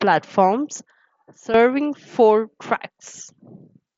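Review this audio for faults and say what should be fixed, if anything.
From 0.80 s to 1.54 s the speech and its background noise drop together by about 11 dB, with no fade in or out, then snap back up. This is a sudden gain jump, likely a digital gain setting applied instantly rather than ramped, through an mSBC headset path that keeps everything below 7.8 kHz. Applying gain changes with a short ramp of a few milliseconds would prevent the abrupt steps.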